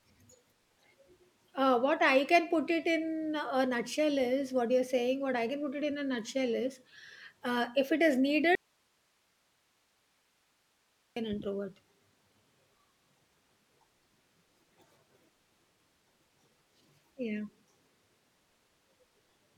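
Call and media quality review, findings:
Audio dropout to a faint residue, 8.55–11.16 s. Signal path likely lost its source while the downstream chain stayed live. Speech cuts abruptly for about 2.6 s, leaving only hiss roughly 45 dB below normal level, then returns mid-flow.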